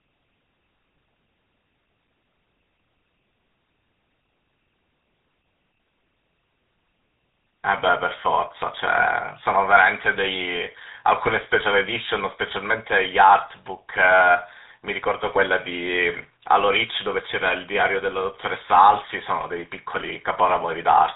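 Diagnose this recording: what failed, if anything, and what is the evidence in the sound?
The failure is at the codec stage: the speech has been through a GSM full-rate codec for its entire length. The band stops near 3.8 kHz, so sibilants and breath noise are dull, and the voice has the buzzy, gravelly roughness this coder produces. It models the vocal tract as a filter and excites it with a coarse, regularly spaced pulse train. The damage is plainly audible and fits the 13 kbps GSM full-rate codec.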